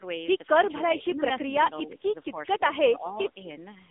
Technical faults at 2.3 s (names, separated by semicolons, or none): AMR narrowband mobile codec; speech suppressed in double talk